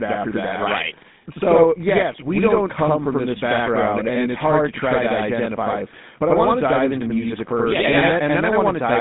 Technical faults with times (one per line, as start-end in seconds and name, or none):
0.00-9.00 channel delay (doubling)
0.00-9.00 GSM full-rate codec